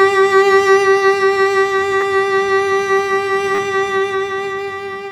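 At 2.01 to 2.03 s, the music stutters with a repeated buffer. New audio arrived late, so the same short slice played twice more. Its length fits a 10 ms buffer. At 3.55 to 3.59 s, it repeats four times. Hard joins make brief buzzing clicks. The music then resumes without a gap.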